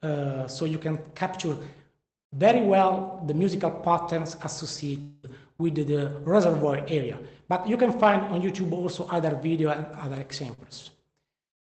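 From 5.01 to 5.28 s the sound is replaced by a fading continuation of itself for about 0.22 s, likely a long network dropout, then resumes without the lost portion.

At 10.54 s a short concealed packet loss leaves a 40 ms hole, filled by extrapolating the preceding sound and blending back, heard as a brief smear.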